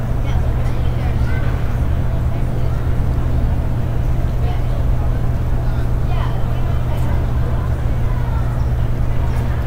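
A clip of sounds, and nothing technically wrong can be heard in it.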